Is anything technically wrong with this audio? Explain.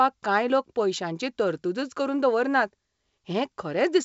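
No, nothing technically wrong.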